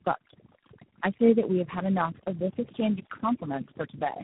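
Throughout the clip, overdone noise removal pulls background bands down to near silence with twinkling specks, taking quiet speech detail with it. Tandem speech coding also runs the whole way. The signal seems to have been decoded and re-encoded at each link, which fits about three speech coders in sequence, ending in something like G.726. The result is roughened, muffled, warbly speech with nothing above 3.8 kHz.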